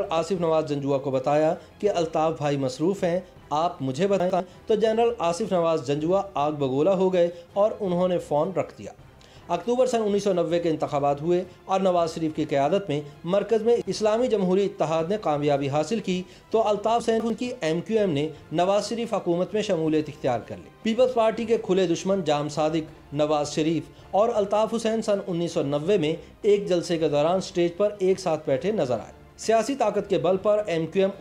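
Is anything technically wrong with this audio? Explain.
Yes. Chunks play out of order twice, at 4.2 to 4.4 s and 17.0 to 17.3 s. A 100 ms block arrives late, one block late then two, and plays after its successors. Nothing is missing, but the sound jumbles briefly across the hard joins.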